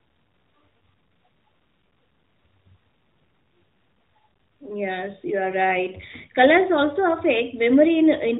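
There are no technical faults to describe, in time order or otherwise, in this speech recording.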